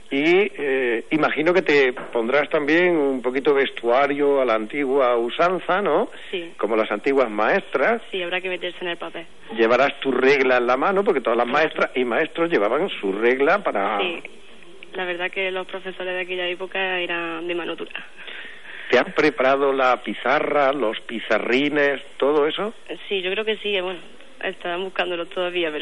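No audible technical fault anywhere in the recording.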